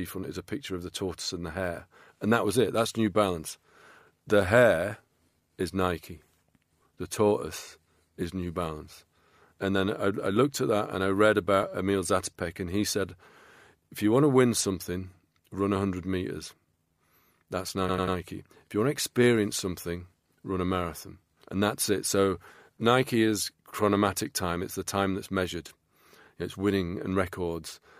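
From 17.88 to 18.16 s the speech stutters with repeated frames: a 92.9 ms block, which fits a few compressed frames, plays three extra times, adding 278.6 ms. A spectrogram shows identical slices.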